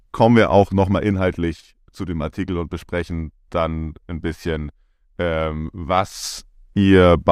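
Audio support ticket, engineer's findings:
Zipper noise: ticking during level moves, 0.51–1.62 s after "kommen wir" (roughly 10 dB down) and 5.89–6.32 s after "dann ein bisschen ähm" (roughly 10 dB up). Gain stepped unsmoothed in 1 dB, then 2 dB increments, about ten per second.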